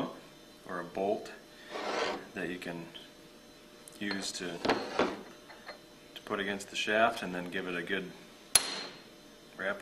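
No technical faults can be heard in this recording, and the signal stays continuous and stable throughout.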